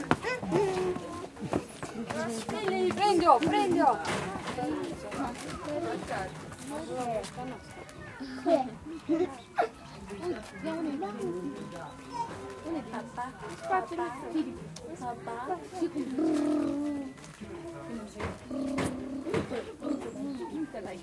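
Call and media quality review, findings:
Nothing to flag here; the audio came through without a single fault worth a ticket.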